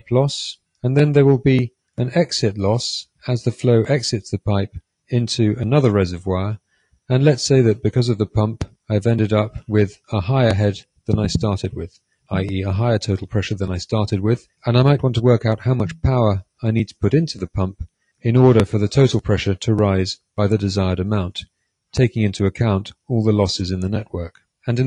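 Nothing here stands out as a technical fault; the audio runs along without any dropouts, glitches or other problems catching the ear.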